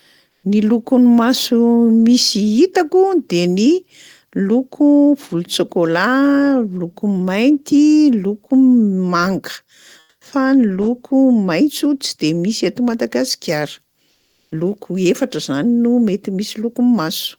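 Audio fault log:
0.31–0.43 s, 10.03–10.21 s (just before "loko maitso") and 14.11–14.47 s, comfort noise in place of the background: during these short pauses, lasting 120, 180 and 360 ms, the natural background is replaced by a steady, featureless hiss, likely from Opus DTX halting transmission while the receiver synthesises filler noise. The substitute sits about 3 dB louder in the first two gaps and about 8 dB quieter in the third.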